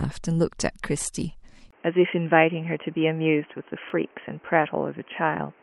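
A sharp little stutter falls between 1.02 and 1.04 s, where one 20 ms slice of the speech plays twice with a hard join. That is a repeated buffer. Fresh audio missed its deadline, so the device replayed the previous block once, with nothing skipped afterwards. At 1.71 s there is a 20 ms gap, and from there to the end the speech turns dull and boxy. Nothing remains above 3.2 kHz, and a new background hiss sits roughly 35 dB beneath the speech, though the level stays about the same. The likely cause is an input switched to a poorer device, a narrower-band microphone or headset call profile taking over mid-recording. The same stutter returns between 3.90 and 3.92 s, another 20 ms block heard twice, again a repeated buffer played one extra time.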